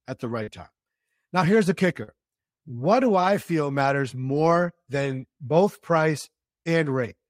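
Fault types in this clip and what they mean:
Short concealed packet loss: at 0.43–0.49 s, 2.03–2.09 s and 6.63–6.67 s, stretches of about 40 ms, 40 ms and 20 ms of the speech arrived too late to be decoded. Each time the receiver covered the gap by extending the preceding sound, carrying its pitch forward where it was voiced or substituting shaped noise where it was not, then crossfaded back into the real signal. Each one is heard as a brief smear or wobble.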